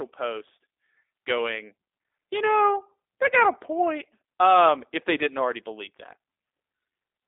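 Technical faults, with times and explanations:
Throughout, G.729 codec: the speech sounds plainly rough and synthetic, which fits an 8 kbit/s G.729A coder rebuilding each frame from a vocal tract filter, pitch predictor and sparse pulses. A spectrogram shows energy cut off sharply at 3.7 kHz, thin below 300 Hz, with grainy harmonics.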